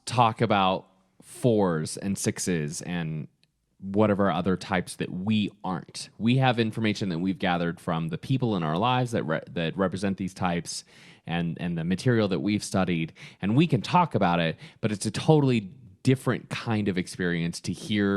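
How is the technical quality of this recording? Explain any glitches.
Listening to the recording, nothing stood out as a technical problem, so there are no glitches to explain.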